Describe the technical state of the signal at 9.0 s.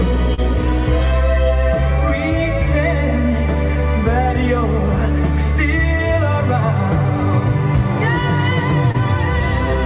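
Just before 9.0 s, from 8.92 to 8.96 s, there is a short concealed packet loss. About 20 ms of audio never arrived in time, so the receiver extended the preceding sound for roughly 24 ms and then blended back into the real signal. It is heard as a brief smear or wobble. On a spectrogram the harmonics or noise briefly freeze into a flat, repeated slice under the 4 kHz ceiling of this G.711-style call audio. The waveform shows a short, overly regular patch.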